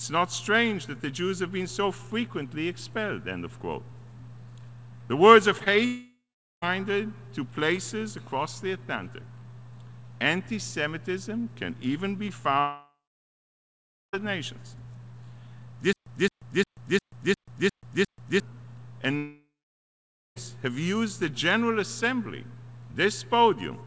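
Two brief smears at 5.58 to 5.62 s and 5.64 to 5.68 s are short concealed packet loss: roughly 20 ms gaps each time, filled by extending the preceding sound.

From 5.86 to 6.64 s the sound turns into a fading buzz or hiss and then about 0.43 s of silence. This is a long network dropout, likely from packets failing to arrive. The same happens from 12.60 to 14.15 s with about 1.2 s of silence, and from 19.17 to 20.38 s with about 0.9 s.

Between 15.93 and 18.40 s, a 218 ms fragment repeats seven times, each followed by 135 ms of digital silence. This stutter with silent gaps likely comes from a stalled stream replaying its last buffer.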